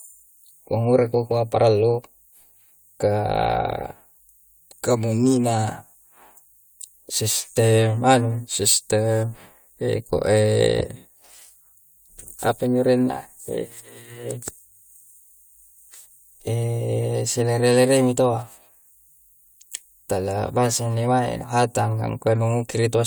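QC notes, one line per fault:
No faults heard.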